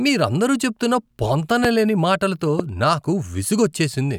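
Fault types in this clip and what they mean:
Loud pop: Two sharp pops cut through the speech, one at 1.65 to 1.67 s and one at 2.59 to 2.62 s. Each is a single brief burst. The first stands roughly 20 dB above the speech, the second roughly 15 dB. The speech carries on unbroken beneath both. The likely cause is a sudden voltage jump, such as a switch, static discharge or driver glitch, entering the signal and being shaped by the circuitry after it.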